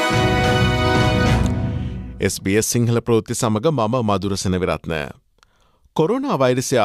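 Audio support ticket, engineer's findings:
No audible faults found in the clip, nothing to attribute to the capture, processing or transport chain.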